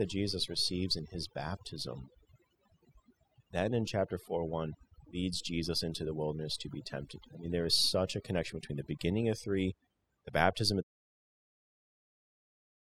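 Overdone noise removal runs through the whole clip. The noise reducer was set too hard. It pulls individual frequency bands down whenever they sit near its noise estimate. Quiet parts of the speech vanish with them. Gaps turn near-silent with twinkling specks, even through the gentle fade-out near 11 s.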